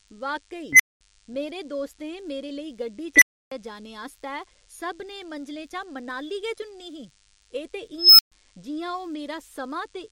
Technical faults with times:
0.00-10.11 DECT cordless phone buzz
0.73-1.01 unstable filter
3.16-3.51 unstable filter
7.98-8.32 unstable filter

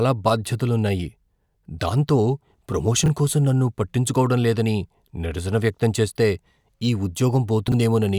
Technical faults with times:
3.04-3.08 chunks out of order
7.68-7.74 chunks out of order

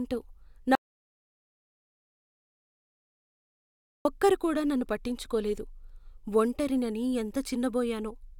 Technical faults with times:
0.75-4.05 audio dropout to silence

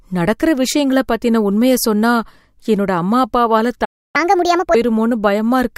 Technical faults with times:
3.84-4.16 playback stall
4.16-4.75 catch-up at higher speed

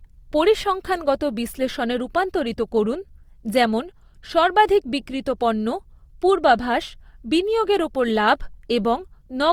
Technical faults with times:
0.00-9.53 Opus compression

